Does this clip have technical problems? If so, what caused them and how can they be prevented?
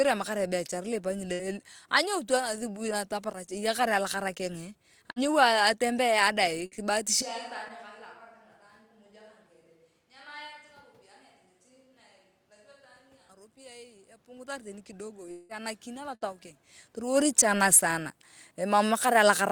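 Yes. At 1.33 s, just before "anyoutu athubui ataparach eyakar", at 5.11 s, just after "ataparach eyakar alakara kengee", and at 6.66 s and 16.15 s, the sound briefly smears into a fading buzz or hiss and then jumps ahead. This is a burst of packet loss: each time about 60 ms went missing, and the receiver stretched the last sound to cover the gap. Prevent it with a steadier network path, a larger jitter buffer, or forward error correction.

From 13.55 s to 16.51 s the sound and background swell together by about 6 dB. Automatic gain rising caused this, as the control judged the input too quiet and slowly raised it. Prevent it by setting a proper input level so the gain control has little to correct.

At 15.31 s to 15.52 s, about 180 ms of sound is replaced by a fading continuation before the audio picks up further on. This was likely a long network dropout, with nothing arriving for that stretch. 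Prevent it with a more reliable connection, such as wired rather than congested wireless links.

From 17.10 s to the end, the sound sinks steadily along with its background. Automatic gain falling caused this, as the control reacted to input it judged too loud or too noisy for its gain and lowered its gain. Prevent it by lowering the source level or using gentler gain-control settings.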